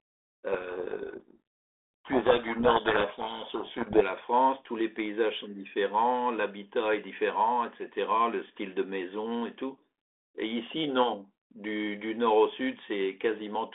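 From 0.52 s to 4.07 s the two ends of the link disagree on the bit order of the G.726 code words, a codec payload misread. The decoder takes each code word with its bits reversed and feeds wrong difference values into its adaptive predictor, so the speech sinks under harsh, grinding distortion. At 4.07 s both sides agree again and the sound returns to the ordinary 32 kbit/s G.726 telephone band of 300 Hz to 3.5 kHz, with its light coding hiss.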